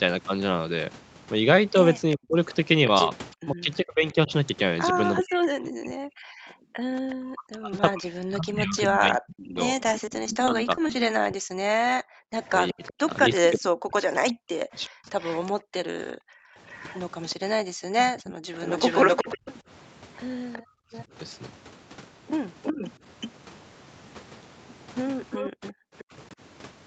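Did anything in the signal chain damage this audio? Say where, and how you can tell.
Yes. Several faults come from the call processing and the network. From 2.11 s to 26.04 s there is an echo leak: a delayed copy of the speech returns about 369 ms behind the original, at about 10 dB below it. The likely cause is a far-end echo canceller that left part of its loudspeaker pickup in the microphone signal and sent it back. A room reflection would arrive within tens of milliseconds and sound smooth. This copy is far later and sounds like a separate repeat.

The talker's speech is suppressed in double talk from 2.16 s to 19.47 s and again from 22.76 s to 26.13 s. It dips and cuts out in pieces by as much as roughly 40 dB. That adds up to around seven seconds in the first stretch and only a brief moment in the second. The canceller likely could not separate its own talker from the echo and turned both down. 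Packet loss would leave the level alone and break up the texture of the sound instead.

Between 10.05 s and 10.91 s, repeated packet loss produces choppy, robotic sound. There are six short gaps on the network path, none longer than 20 ms. Each gap is patched by extending the previous sound, and about 14% of that stretch is concealed. The choppy, stuttering texture separates it from double-talk suppression, which lowers the level but keeps the texture intact.

The background is gated by the echo canceller from 15.6 s to 16.56 s, dropping by up to about 40 dB for roughly half a second. It happens again from 20.63 s to 20.92 s, with a drop of about 29 dB. In both places the room tone falls away while the loudspeaker plays and returns when the canceller releases. This is a gain drop in the canceller. It is not a gap in the network, and the sound that remains keeps its texture.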